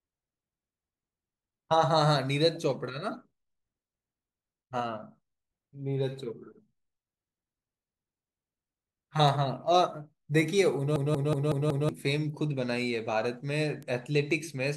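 A speech recording with two kinds of digital fault. Two bit error spikes appear, at 9.28 s and 13.83 s. Each is a single sharp tick, broadband and unrelated to the speech around it. A flipped bit in memory or on a digital link makes one or two sample values jump by a power of two and snap back. The first click spans two samples, the second just one. From 10.96 s to 11.89 s there is a system hang loop. One slice of audio, about 0.19 s long, repeats five times. That gives a machine-gun stutter at roughly 5.4 Hz. The loop length fits an 8192-sample ring buffer. The computer or driver froze while the sound hardware kept replaying that buffer. About a second of real speech is lost.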